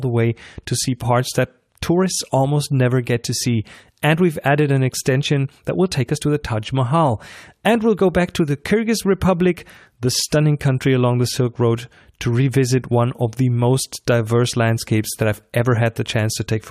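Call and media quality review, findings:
No faults found in recording.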